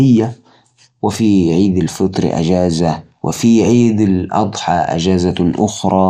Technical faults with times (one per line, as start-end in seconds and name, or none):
0.00-6.09 MP2 compression